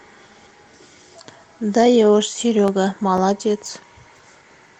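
A speech recording with periodic USB or driver dropouts: every 0.5 s from 2.68 s to 4.67 s, the audio stream briefly stalls, and roughly 2 ms gaps of silence punch regular ticks into the speech, about five in total, over light Opus coding.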